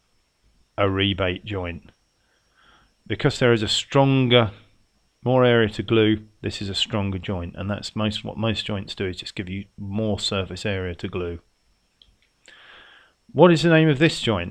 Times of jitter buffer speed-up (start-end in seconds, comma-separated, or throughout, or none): none